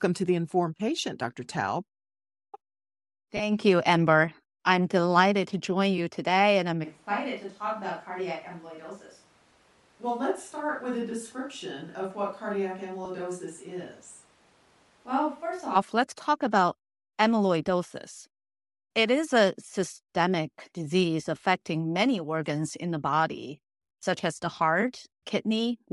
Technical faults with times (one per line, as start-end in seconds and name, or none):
0.00-25.93 Bluetooth LC3 compression
3.37-3.41 lost LE Audio frames
6.85-15.74 switch to a distant microphone
13.05 lost LE Audio frames
24.02 lost LE Audio frames